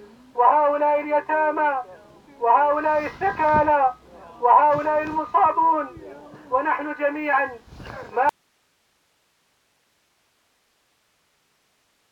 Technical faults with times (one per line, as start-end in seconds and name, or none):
8.29-12.11 audio dropout to a faint residue